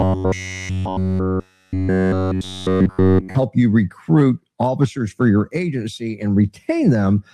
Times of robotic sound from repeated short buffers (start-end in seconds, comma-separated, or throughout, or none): 0.01-3.35